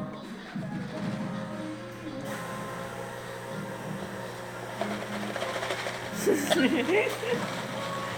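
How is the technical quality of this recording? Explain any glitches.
Nothing in the recording stood out as a technical problem on listening.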